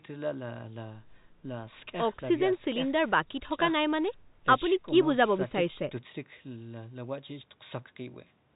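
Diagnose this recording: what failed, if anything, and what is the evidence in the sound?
Nothing has failed: the speech carries the narrow telephone band of G.711 coding, with no content above about 3.8 kHz and at most a faint, level-following quantisation hiss beneath it, and nothing in the sound points to trouble at any stage from wiring through to playback.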